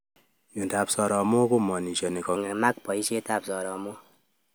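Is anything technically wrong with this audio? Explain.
Yes. From 2.36 s to the end at 4.55 s there is a section at the wrong speed. The speech runs 1.13 times too fast, likely from playback against a mismatched clock, so it sounds hurried and about two semitones higher. Unlike a pure pitch shift, timing and pitch change together.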